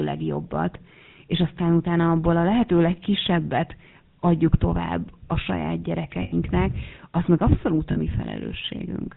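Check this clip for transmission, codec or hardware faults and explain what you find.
Two faults are present: GSM full-rate coding across the whole recording, and two short bursts of lost GSM frames.

GSM full-rate codec, throughout: The speech has the plainly audible buzzy, gravelly grain of the old 13 kbps GSM coder, which rebuilds the voice from a vocal-tract model fed by sparse, regularly spaced pulses. Nothing above 4 kHz survives. Unlike simple band-limiting, the roughness is in the voice itself.

Lost GSM frames, 6.22–6.35 s and at 7.92 s: After "a saját", about 100 ms of the sound is held as a rough, metallic ring while the decoder repeats the last good frame. After "az meg abszolút a", a 40 ms loss does the same. Unlike dropouts, there is no clean silence.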